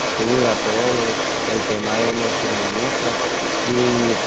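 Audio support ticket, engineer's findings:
Other side's voice leaking through, 0.0–4.3 s, entire clip. Second voice runs under the talker, only slightly quieter. Likely cause: far-end audio from the loudspeaker re-entering the mic, with incomplete echo cancellation. Band-limited to 8 kHz, consistent with Opus at around 24 kbps.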